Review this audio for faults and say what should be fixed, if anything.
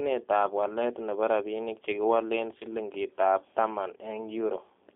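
The whole clip carries G.729 codec damage, plainly audible. At 8 kbit/s, the speech is rebuilt from a filter and sparse pulses, so it sounds rough and synthetic. Nothing passes outside 150 Hz to 3.5 kHz. A wideband codec at a higher bitrate would prevent this.

From 2.58 to 2.64 s, there is VoIP packet loss concealed by the speech codec. About 30 ms went missing, which fits one lost packet. The decoder stretched the last sound into a fading buzzy tone or coloured noise, and the speech stayed weak briefly afterward. A jitter buffer with forward error correction would prevent this.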